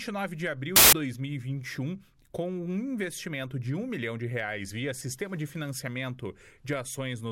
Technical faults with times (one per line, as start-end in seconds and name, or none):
0.76-0.93 samples built from the wrong bytes